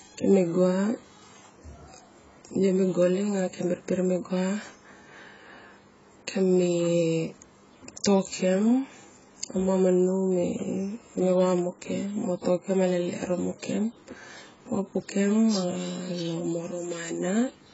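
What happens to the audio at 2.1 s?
At 2.1 s the speech is dull and smeared, with a warbling, fizzy edge on sibilants, as it is throughout the clip. This is likely AAC compression at a very low bitrate, around 16 kbps. A spectrogram shows nothing above 7.7 kHz.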